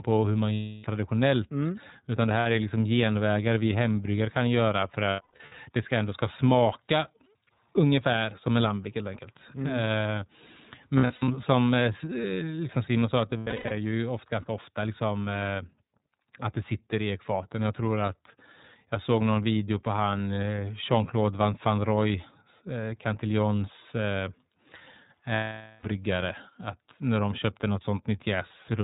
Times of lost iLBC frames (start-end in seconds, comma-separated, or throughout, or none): 0.54-0.85, 2.39-2.46, 5.10-5.52, 10.97-11.28, 13.29-13.72, 25.34-25.84